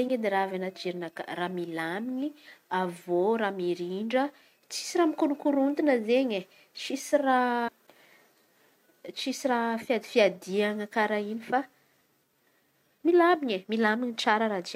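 A brief glitch breaks into this speech recording from 7.64 to 7.69 s, about 50 ms. That is damaged data in the compressed stream: corrupted bytes made the decoder misread frames, lose sync and jump to the next valid frame header.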